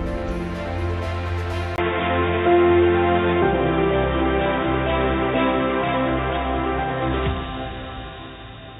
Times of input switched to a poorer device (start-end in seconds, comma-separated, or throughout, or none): 1.76-8.80